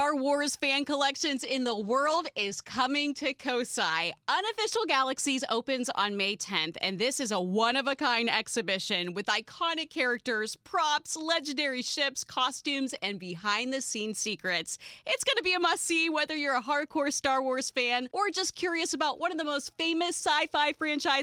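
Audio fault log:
1.23–4.43 s, call bitrate drop: the sound turns rough and watery, roughest for about 1.1 s, as the encoder cuts its bit budget to match a falling bandwidth estimate. The coarser coding fits a drop from 32 to 15 kbps before the bitrate recovers.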